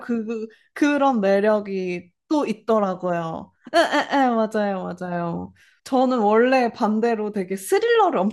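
No technical faults are audible.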